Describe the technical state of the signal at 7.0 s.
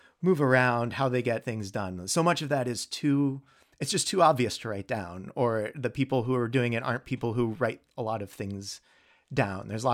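At 7.0 s the speech signal is intact, with no technical fault to be heard at that moment.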